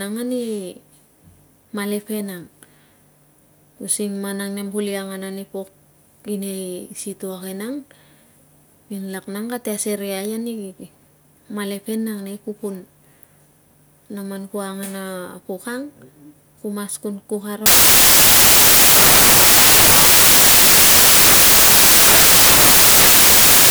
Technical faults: samples built from the wrong bytes

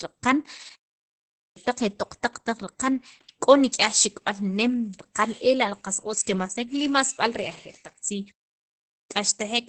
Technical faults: Opus voice compression; clipped start after a pause

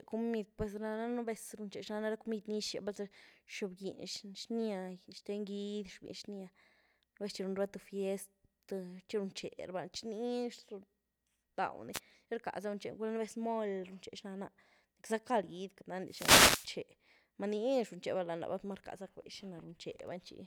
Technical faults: wireless microphone noise hit

